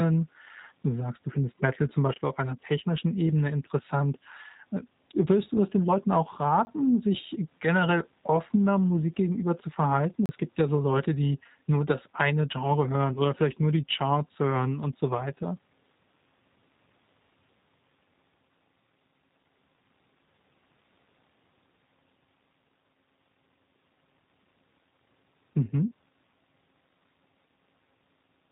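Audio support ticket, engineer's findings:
G.729 codec, whole clip: band-limited, slightly rough and synthetic speech, nothing above 3.8 kHz. Consistent with an 8 kbit/s G.729A path. Speech is rebuilt from a vocal-tract filter, pitch predictor and sparse pulses per 10 ms frame, hence the buzzy texture. It differs from a plain low-pass filter because the roughness sits inside the passband, not just at the top.

Chunks out of order, 2.14–2.18 s: brief jumbled blip. A 20 ms chunk played one chunk late, so two adjacent blocks swapped places. Likely a jitter buffer or writer-ordering fault. Nothing is missing, which separates it from a dropout. Three hard joins where mismatched waveforms meet.

Block of digital silence, 6.65–6.67 s (20 ms) and 10.26–10.29 s (33 ms): sound cuts to silence and back with no fade, giving a short hole. Probable cause is an output buffer not filled in time. Unlike the reordering fault, the sound actually drops out.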